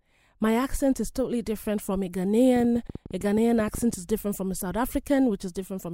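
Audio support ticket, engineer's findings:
Train of clicks, 2.56–3.95 s: about 15 irregularly spaced ticks, 11.7 per second, peaking about 5 dB above the speech. Waveform shows sharp narrow spikes; spectrogram shows thin full-band vertical lines. Likely nearby-equipment interference or a faulty connection or power supply injecting pulses.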